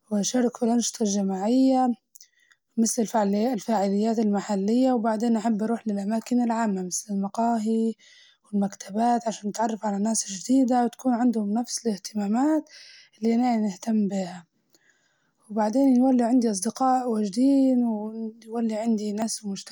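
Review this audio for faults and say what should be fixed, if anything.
A dropped buffer (overrun) likely occurred twice: the capture side failed to collect its samples before the hardware overwrote them. The speech jumps at 7.3 s, just after "أروح للأماكن العامة مسل", losing about 20 ms, and at 19.22 s, losing around 70 ms. Give the recording thread higher priority or use larger capture buffers so reads keep pace with the hardware.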